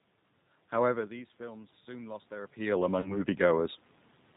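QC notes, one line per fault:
throughout: G.729 codec, plainly audible damage, speech rebuilt from filter and pulses at 8 kbit/s, nothing above 4 kHz, giving a rough, slightly synthetic edge.
0.83 to 3.81 s: automatic gain rising, after the talker's level dropped by about 16 dB, gain crept up about 6 dB, swelling voice and room noise together.
3.00 to 3.25 s: VoIP packet loss concealed by the speech codec, a 40 ms gap that fits two lost packets, filled with a fading extrapolation that stays weak or distorted afterwards.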